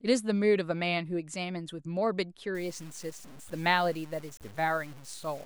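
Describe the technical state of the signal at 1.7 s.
At 1.7 s the speech signal is intact, with no dropout, clipping, glitch or other technical fault to be heard.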